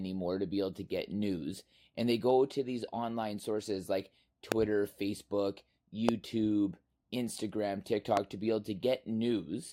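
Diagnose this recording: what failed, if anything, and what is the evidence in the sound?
Loud pops, three single ones, at 4.52–4.54 s, 6.09–6.11 s and 8.17–8.19 s, each roughly 20 to 25 dB above the speech, which carries on unbroken underneath. The stage is likely the analogue wiring, where a voltage step from a loose plug, switch or static discharge is shaped by later circuits into a brief thump. This differs from dropouts or digital clicks: nothing is removed or repeated, and the spikes are added on top of continuous audio.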